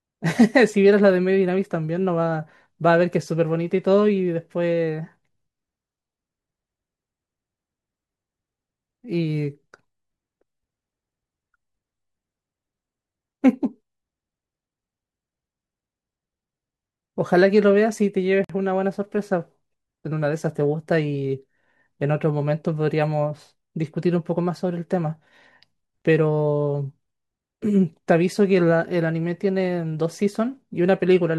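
At 18.44 s the speech stops dead for about 51 ms and resumes at 18.50 s, a gap at a join of encoded pieces. Two separately encoded segments were joined without trimming, so the encoder's start-up delay and final-frame padding sit between them as silence. The edges are abrupt but smeared by the codec. Unlike a dropout, no sound is lost: the speech continues exactly where it broke off.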